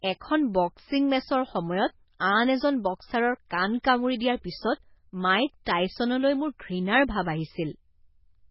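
MP3 compression, likely, runs through the whole speech clip: nothing survives above 5.6 kHz, and the heavy, watery swirl and chirpy sibilants suggest a very low bitrate, around 16 kbps, where the encoder drops the treble and switches weak frequency lines on and off between frames.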